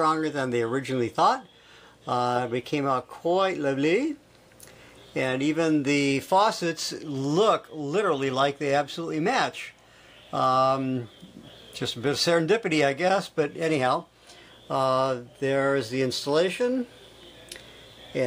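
Two devices in the chain are likely running on separate, unsynchronised clocks that disagree by something like a tenth of a percent, so a single sample is dropped or repeated each time the drift adds up to a whole sample. That happens roughly every 20 ms from 0.11 s to 18.26 s, several hundred clock slip clicks in all, which merge into a soft, continuous rattle under the audio, most noticeable where the signal is loud or sustained.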